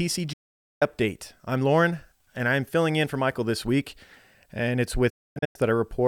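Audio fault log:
0.33–0.82 s, digital broadcast dropout: the sound fades out over about 8 ms into about 480 ms of silence, then resumes further along. That points to roughly fifteen corrupt frames muted by the receiver. A clean mute with skipped content, not a click, stutter or concealment smear.
5.10–5.56 s, digital broadcast dropout: several short holes spread over 448 ms, totalling 384 ms, the longest 256 ms, each with the same quick fade. Intermittent failed frames cause it, not a single loss, and the missing sound is dropped rather than delayed.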